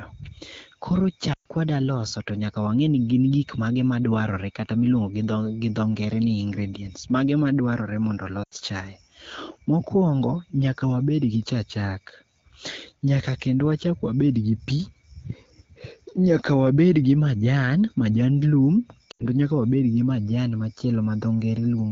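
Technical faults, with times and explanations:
1.33–1.47 s, lost AMR speech frames: for about 120 ms, which fits six lost 20 ms frames, the decoder repeats the last good pitch and vocal-tract settings at falling gain, so the sound drops to near silence within two frames before recovering.
8.43–8.54 s, lost AMR speech frames: just after "ingredients mage madwarre mondo", an 80 ms gap is filled by the same fading concealment, heard as a quick drop to near silence.
19.11–19.26 s, lost AMR speech frames: after "gi majan majand lum", another concealed gap of about 80 ms drops to near silence, with the surrounding wideband speech at 12.65 kbit/s clear.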